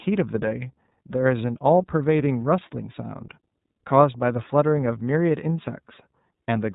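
The clip is speech carried through the iLBC codec for its whole length. Nothing above 4 kHz survives, so sibilants and consonant edges are dull, and the plainly audible coding damage gives the voice a rough, slightly synthetic texture. Each frame's excitation is coded on its own, without drawing on the previous frame. That character fits iLBC's 30 ms frame mode at about 13.33 kbps.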